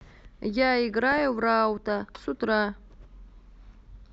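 From 1.12 to 1.22 s, weak reception lets bit errors slip past the DAB error correction and into the MP2 audio data, with an error rate of well under one percent. This is DAB burbling: corrupted samples put short blips of noise in single sub-bands, and corrupted scale factors make individual sub-bands leap in level for up to a frame. Over the speech, this tenth of a second burbles over the voice.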